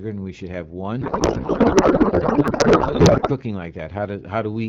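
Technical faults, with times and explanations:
1.01 to 3.31 s, codec payload misread: Right after "and we should have", the speech gives way to garbled, warbling noise that barely tracks the talker. The frames arrive intact, but the receiver unpacks them with the wrong AMR layout, reading octet-aligned payloads as if they were bandwidth-efficient. Every field is shifted, so the decoder builds sound from misplaced parameters until both sides agree on the packing, while the clean 12.65 kbit/s AMR-WB speech returns.
1.26 s and 2.48 s, dropped buffer (overrun): Each moment is a slight jump forward in the sound, with no gap of silence. The likely cause is that the capture side failed to collect its samples before the hardware overwrote them. That lost a few milliseconds at 1.26 s and about 10 ms at 2.48 s, and the surviving audio on either side was spliced directly together.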